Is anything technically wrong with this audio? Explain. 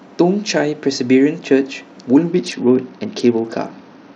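Yes. There is a Bluetooth SBC bit pool drop starting at about 2.31 s and lasting to the end of the clip. The link appears to have congested, so the sending phone cut the SBC bit pool. The degradation fits a fall from around 28 to about 8, near 72 kbps. With so few bits, the upper sub-bands are starved and the rest are coarsely quantised. The speech turns dull in the treble, and a gritty, grainy noise rides on it.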